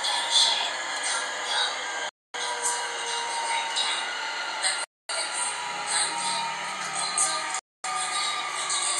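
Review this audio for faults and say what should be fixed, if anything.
A gap between chunks cuts the sound three times, at 2.09–2.34 s, 4.84–5.09 s and 7.59–7.84 s. Each hole is 250 ms of silence after a 2.5 s chunk, so the interruptions repeat every 2.75 s. Nothing is lost; the sound is interrupted at each join before the next chunk starts. A waveform shows flat near-silent runs with abrupt edges, and a spectrogram shows empty full-height vertical bands. To prevent it, queue and concatenate chunks seamlessly, trimming any codec padding.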